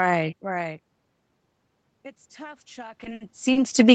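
From 2.35 s to the end, voice and background swell up together: automatic gain rising, as the control slowly lifts its gain after the input fell by about 21 dB. Between 3.01 and 3.58 s the sound drags and stutters through five brief stretches, the longest 60 ms. These are repeated stalls, where late packets emptied the jitter buffer and the receiver held the last sound for 120 ms in total, losing nothing.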